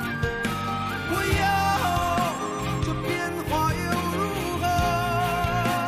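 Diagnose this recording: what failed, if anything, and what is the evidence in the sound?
Nothing failed at any stage from wiring to playback; the audio shows no dropouts, clicks, clipping, distortion or timing errors anywhere.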